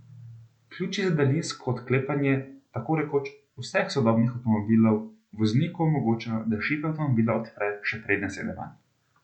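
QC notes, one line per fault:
No faults heard.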